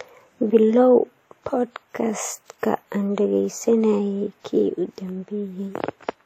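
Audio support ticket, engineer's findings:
Likely WMA compression through the chain, low-bitrate transform coding consistent with about 48 kbps. Throughout the speech: ringing, washy smear, hiss pumping with level; band empty above 16.7 kHz; quantisation noise spread across long blocks, weak spectral lines zeroed.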